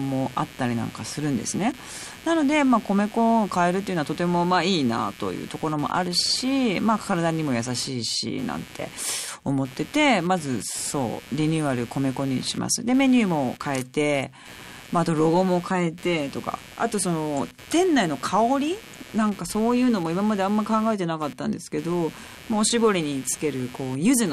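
Load changes in the computer, from the processor, graphics card or mouse activity, are disturbing the ground that the audio circuit shares, so electrical noise from the machine rides into the recording as computer activity noise. Throughout the speech this comes through as a buzzing, chirping texture pulsing at around 150 times a second, sitting roughly 20 dB below the voice and rising and falling with what the computer is doing rather than with the speech itself.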